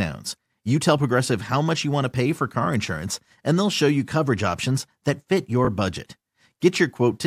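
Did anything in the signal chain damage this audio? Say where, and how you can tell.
Yes. A Bluetooth stutter from 5.65 to 5.67 s, just after "coverage options that fit": a roughly 20 ms slice repeats, which fits one lost wireless packet that the receiver filled by replaying its buffer.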